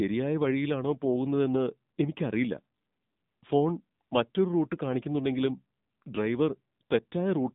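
The clip is speech carrying AMR narrowband mobile codec damage throughout. The audio is squeezed into a telephone band of roughly 150 Hz to 3.7 kHz, with nothing above 3.7 kHz. The coding artefacts are plainly audible, which fits a low AMR-NB mode around 7.4 kbps.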